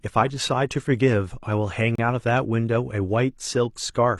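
At 1.95 to 1.99 s there's a gap between stream segments: mismatched time stamps leave a hole of about 30 ms, filled with hard-edged silence, though no speech is lost.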